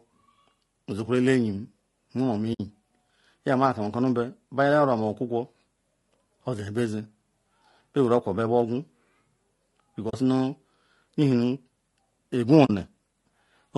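Across the whole speech clip the voice has a rough, grainy texture, with noise filling the gaps between harmonics and a top band that sounds thin and somewhat synthetic. This is likely low-delay AAC compression of the AAC-ELD kind used for video calls. Its short frames resolve pitch harmonics poorly and spend bits quickly, and the degree of damage fits a bitrate around 32 kbps.

At 2.53 s the sound fades into a brief soft-edged hole lasting about 60 ms before fading back. This is AAC frame loss with muting, consistent with three frames of about 20 ms each being lost and zeroed by the decoder. The overlapping windows smooth the edges. Two shorter gaps of the same kind, each about 40 ms and matching two lost frames, occur at 10.09 s and 12.65 s.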